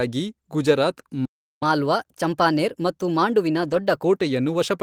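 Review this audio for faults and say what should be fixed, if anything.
Playback stall, 1.25 to 1.63 s: the player likely ran short of buffered data or had its output thread blocked, so the output went silent for about 0.36 s mid-flow before the speech resumed. A deeper jitter buffer and a non-blocking audio thread would prevent it.

Catch-up at higher speed, 1.63 to 4.03 s: after the stall the player resampled its backlog to win back lost time, playing at 1.15x speed. The speech sounds hurried and about two semitones higher, then returns to normal. Time-stretching without a pitch change, or a gentler catch-up rate, would fix this.

Lost packet rebuilt from error correction, 3.63 to 3.77 s: about 80 ms of audio, which fits four lost 20 ms packets, was rebuilt from the low-bitrate copies carried in the following packets. There is no gap, but that stretch sounds rougher and noisier. Reducing packet loss on the network path would avoid it.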